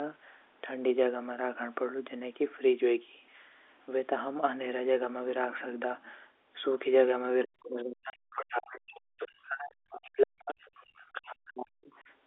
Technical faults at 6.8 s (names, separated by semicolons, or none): none